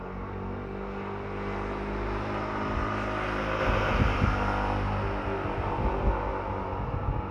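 A doubled audio track starts abruptly at 3.6 s and runs to the end. A second full-band copy of the sound trails about a fifth of a second behind at roughly equal loudness, dry and undecayed, likely from a slower capture path or misaligned edit.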